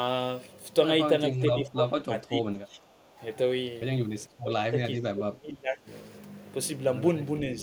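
From 1.3 to 2.78 s the speech sinks by roughly 20 dB, then dips again from 4.26 to 4.75 s and from 4.95 to 5.89 s, the last dip deepest at around 25 dB. This is likely speech suppressed in double talk: an echo canceller that mistook this talker for loudspeaker echo. Unlike packet-loss dropouts, the cuts are attenuation lasting about half a second to a second, not sudden silent gaps.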